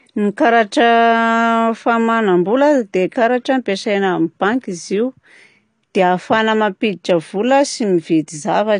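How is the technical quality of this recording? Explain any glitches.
The quality is compromised: the speech sounds noticeably dull and processed from start to finish. The whole clip shows what is most likely AAC compression. Nothing reaches above about 9.8 kHz, so the top end is simply cut off, and the damage is plainly audible as a smeared, watery texture on sibilants. That fits an AAC-LC encoder at a low rate, around 32 kbps, discarding high-frequency detail and coarsely quantising what remains to save bits.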